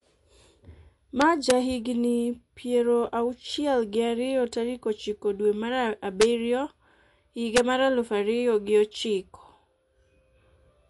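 MP3 compression runs throughout: the speech has a watery, swirling quality and nothing above 11.3 kHz, likely from encoding at a low bitrate around 48 kbps. Integer overflow occurs at 1.22 to 1.51 s, 6.21 s and 7.56 s, with peaks at about 0, 1 and 2 dB over the limit wrapping to the opposite sign and producing sharp cracks.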